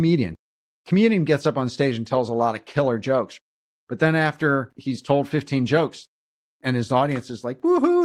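No technical faults can be heard anywhere in the recording, with the level, timing and continuity of the speech holding steady throughout.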